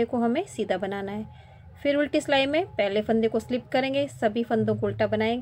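No technical faults can be heard anywhere in this audio.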